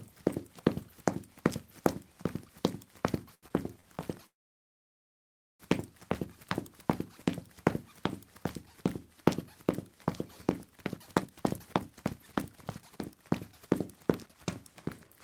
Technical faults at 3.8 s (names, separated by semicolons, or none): short stall from a late packet